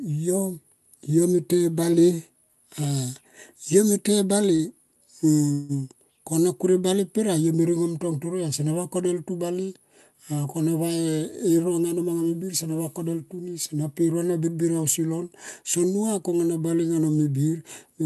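At 4.55 to 4.62 s, a short stall from a late packet stretches the speech by about 38 ms. The spectrogram shows smeared horizontal harmonics where the last sound was held, with nothing lost.

From 5.52 to 5.72 s, a call audio freeze inserts 168 ms of continued sound, likely from packets held up in transit. It appears as a fading, buzzy band without a silent gap before the speech resumes.

Between 10.91 and 12.21 s, a jitter buffer speed-up plays the speech at 111% speed. It trims roughly 150 ms in many small pitch-period cuts, so the waveform looks compressed and the pitch stays unchanged.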